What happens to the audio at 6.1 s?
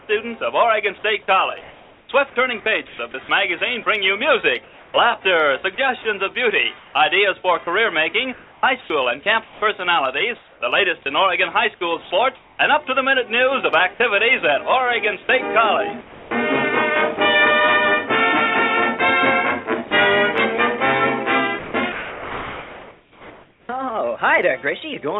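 At 6.1 s the audio is intact, with nothing disturbing it beyond the call path's normal narrowband sound, which has nothing above 4 kHz, consistent with a G.711 A-law codec.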